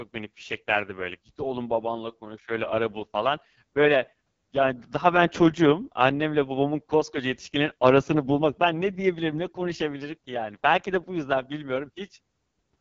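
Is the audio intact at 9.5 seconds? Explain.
No. At 9.5 seconds, as throughout the clip, the speech carries AMR wideband (HD Voice) codec damage. The rough, raspy texture fits its lowest 6.6 kbit/s mode. Its pulse-driven model coarsely rebuilds the voice, with nothing above 7.5 kHz.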